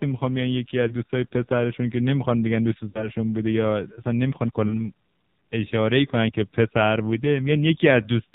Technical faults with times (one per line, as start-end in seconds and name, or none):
0.00-8.34 AMR narrowband mobile codec
0.88-0.93 lost AMR speech frames
2.90-3.09 lost AMR speech frames
4.68-4.74 lost AMR speech frames